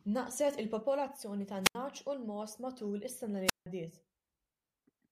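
Wireless microphone squelch dropouts occur at 1.62 to 1.75 s and again at 3.45 to 3.66 s in this speech. In each, the analogue FM radio link weakens, a short swell of hiss or static rises, and the receiver's squelch then cuts the output to near silence, for about 81 ms the first time and about 167 ms the second, before the signal recovers and the voice comes back.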